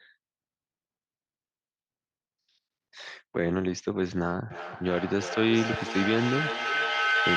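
Feedback howl from 4.5 s to the end of this speech clip: two devices sharing a room and call loop sound back with rising gain. It narrows to a tone around 1.5 kHz, pulsing roughly every 300 ms and peaking about 2 dB above the speech.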